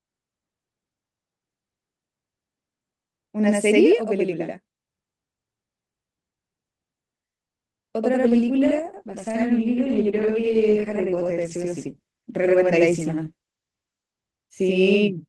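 Speech throughout carries a channel delay (doubling): one channel lags about 85 ms, which fits a 4096-sample buffer, so the mono sum gives a slap echo, visible as repeated onsets on the waveform. From 8.22 s to the end, a call bitrate drop makes the sound rough and muffled, consistent with the encoder falling from about 32 to 13 kbps and staying lowest for roughly 5.8 s. On a spectrogram the upper band visibly thins out.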